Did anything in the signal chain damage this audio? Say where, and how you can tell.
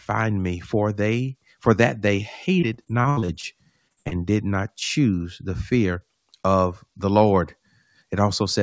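Yes: repeated packet loss on the network at 2.6–3.46 s and 3.88–4.14 s, before "did not choose the". Concealment stretches earlier sound across short gaps, which sounds choppy and robotic.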